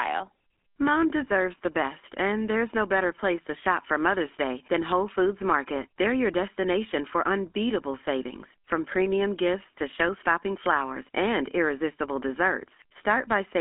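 From start to finish the speech carries the GSM full-rate codec's signature: a buzzy, gravelly roughness laid over every voiced stretch, plainly audible and consistent with its 13 kbps rate. The codec rebuilds the voice from a vocal-tract model driven by a sparse, regular pulse train, which produces that grainy texture. A plain telephone band-limit alone, here roughly 250 Hz to 3.5 kHz with nothing above 3.8 kHz, would sound thin but smooth. This rasp is what marks it as GSM.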